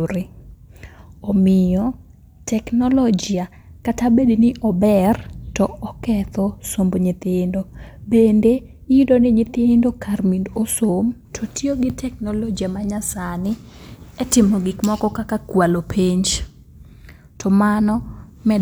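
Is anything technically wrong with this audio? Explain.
No, nothing technically wrong turns up anywhere in this speech recording, so there's really nothing to flag here.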